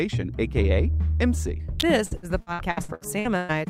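At 1.80 to 1.82 s there's a sharp snap on top of the sound, an electrical switching spike, likely a nearby switch or static discharge getting into the line. Then from 2.05 to 3.52 s it turns choppy and robotic: repeated packet loss, with nine dropouts patched by stretching the last sound, the longest around 119 ms, covering about 40% of that stretch.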